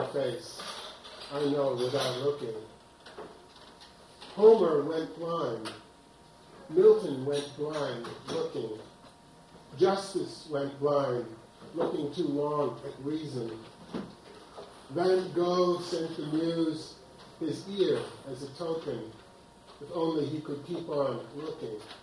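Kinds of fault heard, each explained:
No technical fault can be heard anywhere in the signal, with nothing in it that points to a problem in capture, processing or transmission.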